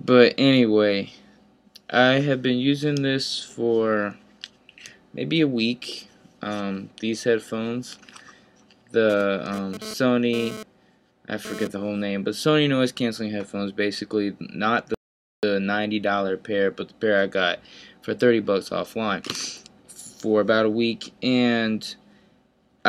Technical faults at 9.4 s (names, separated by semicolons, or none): GSM phone buzz